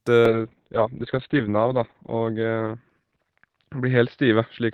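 Speech affected by a call bitrate drop from 0.3 s to the end at 4.73 s. The encoder's bit budget collapses, and the audio turns coarse and muffled as bandwidth narrows from 20 kHz to 4 kHz. That is consistent with a fall from about 48 to 6 kbps, at its worst for 1.27 s.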